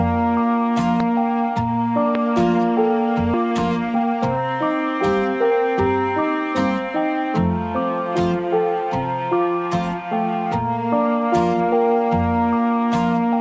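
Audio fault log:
1.00 s and 2.15 s, loud pop: two single sharp pops, each about 15 dB above the sound, which carries on underneath. These are likely voltage spikes from a switch, plug or driver glitch getting into the signal, with the circuitry after them rounding each into a brief crack.
3.34 s, skip ahead: playback jumps forward with no gap, losing roughly four tenths of a second. That chunk got thrown away, most likely by an overfull jitter buffer, while later audio was already queued, so the two sides butt straight together.
3.44 to 4.37 s and 5.35 to 6.22 s, jitter buffer speed-up: the buffer was still holding too much, so it clipped out tiny pitch-period slices over and over, about 150 ms in the first stretch and 50 ms in the second. That runs at 114% and 105% speed, hurried but at unchanged pitch, with the G.722 call path's 8 kHz ceiling underneath.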